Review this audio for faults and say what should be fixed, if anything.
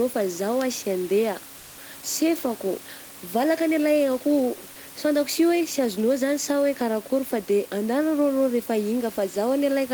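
Comfort noise in place of the background occupies 1.57 to 1.77 s: for about 200 ms the real room noise, sitting about 23 dB below the loudest speech, gives way to a steady, featureless hiss roughly 1 dB quieter, then the genuine background returns with the next sound. The likely cause is discontinuous transmission, consistent with Opus DTX, where the sender pauses during detected silence and the receiver synthesises shaped noise. Disabling DTX on the encoder, or making its voice detector less eager to declare silence, would prevent this.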